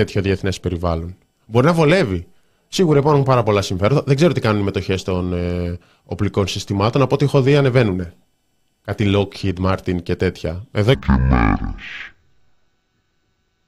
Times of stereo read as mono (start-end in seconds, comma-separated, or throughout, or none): 10.94-13.68